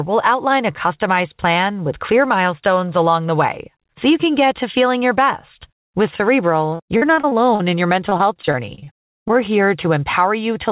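From 6.7 to 7.61 s, just before "in your", the speech turns choppy and robotic, with pieces of sound missing. It comes back from 8.09 to 9.36 s, just after "in your". This is repeated packet loss: audio packets keep going missing, and each hole, the longest about 43 ms in the first stretch and 38 ms in the second, is patched by stretching the preceding sound. About a quarter of each stretch is filled this way. Through the narrowband call path, nothing is heard above 4 kHz.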